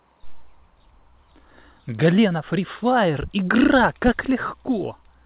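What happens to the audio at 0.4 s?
Nothing goes wrong at 0.4 s; the speech is intact there, carried through the call path with its narrowband sound and nothing above 4 kHz.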